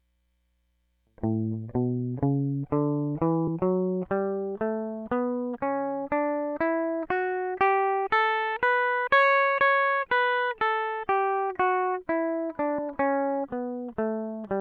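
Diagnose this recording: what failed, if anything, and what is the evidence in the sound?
The music skips forward twice, at 3.47 s and again at 12.78 s, which points to compressed frames skipped at the codec decoding stage. First the music jumps ahead by roughly a tenth of a second, then by about 150 ms, which fits a few whole 32 ms frames being dropped. On a spectrogram this shows as an abrupt content discontinuity.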